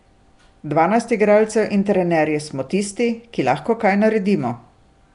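Speech runs its whole length with a rough, hissy halo and a smeared, underwater quality, with nothing above 10.6 kHz, likely Nellymoser compression at a rate that fits about 44 kbps. Unlike the watery swirl of a low-bitrate MP3, weak bands here are replaced with noise.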